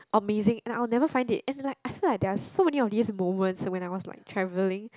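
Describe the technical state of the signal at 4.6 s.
At 4.6 s the speech signal is intact, with no audible technical fault.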